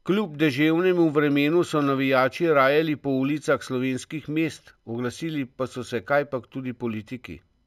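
Speech, with imaging from linear upsampling throughout: the top of the band is dulled, and a faint mirrored copy of the spectrum sits between 8 kHz and 16 kHz, some 35 dB down, adding a thin metallic shimmer to sibilants. This points to straight-line interpolation from 16 kHz to 48 kHz.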